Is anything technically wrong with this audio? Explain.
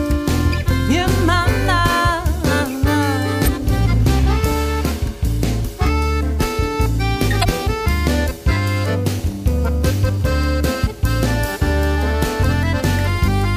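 Yes. Damaged data in a compressed stream breaks the audio at 3.44–3.48 s, 7.41–7.45 s and 12.42 s. Corrupted bytes make the decoder misread frames and lose sync until it finds the next valid header, producing brief chirps or squawks. On a spectrogram these appear as short broadband smears, with abrupt discontinuities in the waveform.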